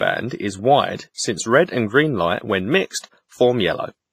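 Throughout the speech, heavy transform coding, likely WMA compression at a low bitrate near 24 kbps, leaves quantisation noise smeared across long blocks and weak detail zeroed. The result is a ringing, washy sound with hiss that swells and fades with the signal, and nothing above 15.6 kHz.

From 2.99 to 3.04 s, a sharp attack falls late in a coding block, so noise sized for the loud onset also fills the quiet moment before it. That pre-echo spreads about 48 ms ahead as a brief hiss, leaving the attack soft and smeared.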